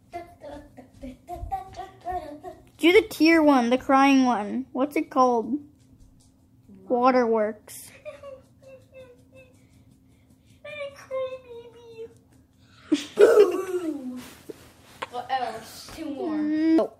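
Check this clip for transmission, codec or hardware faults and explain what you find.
The signal shows no transmission, hardware or processing faults anywhere in its course.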